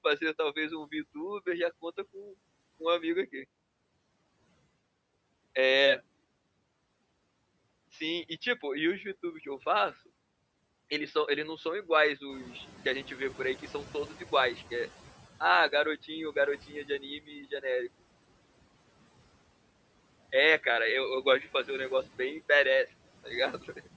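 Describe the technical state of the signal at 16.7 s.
Around 16.67 to 17.03 s the speech briefly sounds swallowed, dipping by about 9 dB for roughly a tenth of a second: speech cut by the noise suppressor, which mistook it for background noise.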